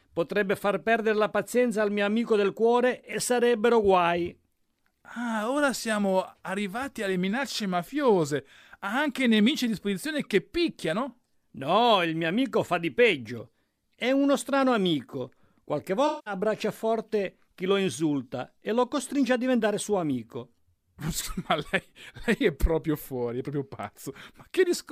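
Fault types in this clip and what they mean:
AAC frame loss with concealment: Compressed audio blocks went missing and the decoder filled each gap by reusing the last good spectrum instead of leaving a hole. At 11.10 to 11.13 s a roughly 21 ms patch, consistent with a single lost frame, smears briefly. From 16.07 to 16.34 s, about 190 ms of reconstructed audio, fitting several consecutive lost frames, sounds noisy and phasey before the speech resumes on "forte chi lo insulta".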